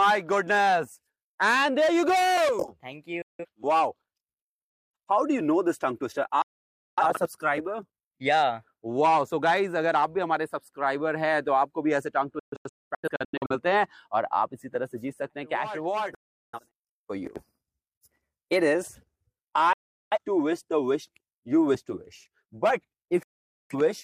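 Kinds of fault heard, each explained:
Digital broadcast dropout: six abrupt silences losing 0.17 to 0.73 s each, one split into several short holes; the receiver muted while frames were lost or corrupted.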